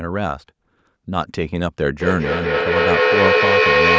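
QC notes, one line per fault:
1.96–3.99 s, feedback echo between two devices: a nearby device replays the captured sound, the microphone picks it up again, and repeats roughly every fifth of a second pile up to about 5 dB above the speech.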